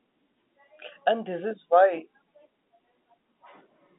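No faults are audible in the speech; the band runs from about 250 Hz to 3.7 kHz with nothing above 3.8 kHz, which fits ordinary G.711 telephone coding, A-law at 64 kbps.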